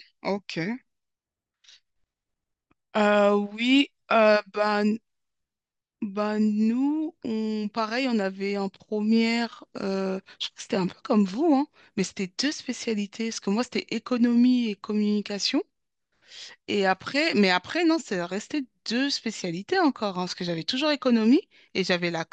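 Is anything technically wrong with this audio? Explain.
Yes. From 19.71 to 19.75 s the speech briefly burbles. This is DAB burbling: with marginal reception, a low residual bit error rate of about a tenth of a percent slipped past error correction and corrupted samples, putting short blips of noise into individual sub-bands. The length fits two damaged audio frames.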